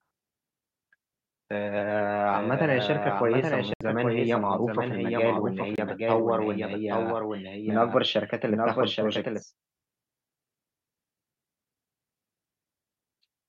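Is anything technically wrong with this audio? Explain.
Yes, two problems. From 2.33 to 9.43 s there's a doubled audio track: a copy trails the original by about 0.7 s and runs a few dB quieter. It's likely from a second, slower capture path or a misaligned edit, and it starts and stops abruptly with no room colour. There are also two Bluetooth dropouts, at 3.74–3.81 s and 5.76–5.78 s. The sound cuts to silence, then resumes as if it had kept playing, likely because packets reached the headphones late and were discarded.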